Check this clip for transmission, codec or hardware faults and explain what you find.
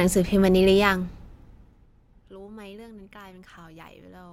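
One fault: zipper noise from 0.74 to 1.90 s, as the speech level drops by about 25 dB in 1 dB steps, roughly twenty per second, with no smoothing. Each step clicks, giving a ticking ramp.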